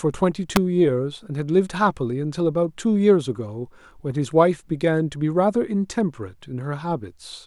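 At 0.56 s a sharp snap cuts across the speech, an electrical switching spike lasting only a few milliseconds and peaking close to full scale. A nearby switch or motor arcing into the audio line is the likely cause. On the waveform it shows as a tall, narrow spike, and on the spectrogram as a thin vertical line spanning all frequencies.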